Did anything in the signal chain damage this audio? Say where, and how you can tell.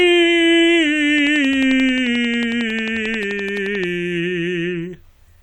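Yes. A train of clicks runs from 1.18 to 3.85 s: around thirty near-identical pops at a regular 11.3 per second, peaking about 10 dB above the music. The steady pace and constant shape point to likely electrical interference in the analogue wiring, not random crackle or dropout gaps.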